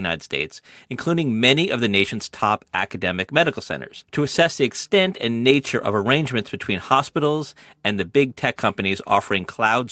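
Nothing here counts as a fault: the speech has simply come over an ordinary call link, with the top end stopping at about 8 kHz, just as a normal call path does.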